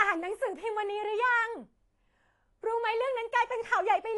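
AAC compression runs throughout the speech, from start to finish. Nothing sounds above about 11.5 kHz, and the damage is plainly audible: the top end is dull and smeared, and sibilants and held vowels take on a watery, fizzy warble. This likely comes from AAC-LC coding at a low bitrate, which fits roughly 32 kbps. At that rate the encoder lowers its cut-off.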